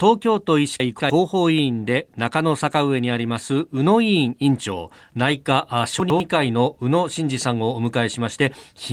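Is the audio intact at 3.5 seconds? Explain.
Yes, the audio is intact at 3.5 seconds, with no dropout, click or other fault at that moment.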